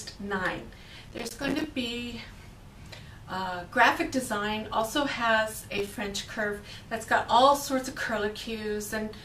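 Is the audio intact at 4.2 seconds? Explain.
Yes, at 4.2 seconds the audio runs through without any dropout, click, distortion or other audible fault.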